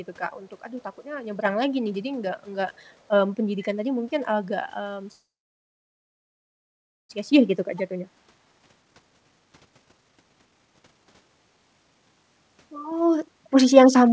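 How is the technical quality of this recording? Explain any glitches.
The recording has three glitches, all typical of a call path, and the whole clip is band-limited with nothing above 8 kHz, which fits a wideband call codec such as G.722.

From 3.63 to 3.67 s a faint, brief repeat of earlier speech surfaces, about 30 dB below the main voice and lagging it by 473 ms. This is likely an echo leak: a far-end loudspeaker fed the microphone, and the echo canceller let a scrap of that pickup return.

Between 5.12 and 7.11 s the audio stalls for about 2 s, with roughly 1.83 s of near-silence after the last sound decays. The likely cause is a call audio freeze: delayed packets drained the jitter buffer. Speech then resumes where it stopped, with nothing lost.

From 7.31 to 12.24 s the speech runs at about 140% speed while keeping its pitch, so it sounds hurried. This is a jitter buffer speed-up: the receiver cut short pitch-period slices, removing around 2 s in total, to work off the delay built up during the freeze.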